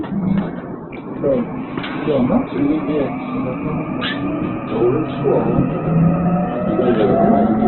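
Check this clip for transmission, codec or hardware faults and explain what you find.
Two faults are present in this everyday-sound recording.

Throughout, the audio has heavy Opus compression damage, likely from a low-rate music-mode encode. Nothing is present above 4.1 kHz, and tones sound grainy and noisy, consistent with roughly 8 kbps.

From 0.38 to 0.40 s, a single loud pop stands about 10 dB above the sound. It is likely a voltage step or pulse, such as a switch or a glitch, added onto the signal, which continues underneath.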